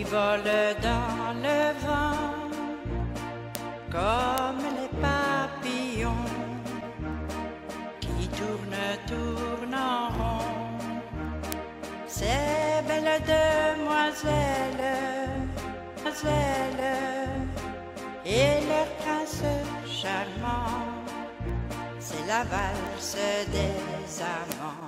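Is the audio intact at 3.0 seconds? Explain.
No. At 3.0 seconds the audio carries word clock ticks, which run from 0.25 s to 24.79 s. A digital link was read by a device on its own clock, not locked to the sender's. The clocks differ by around 70 ppm, so they slide past each other about every 0.3 s. Each time, a few samples are misread and one sample is dropped or repeated. The result is around seventy sharp ticks of uneven strength at a steady rate.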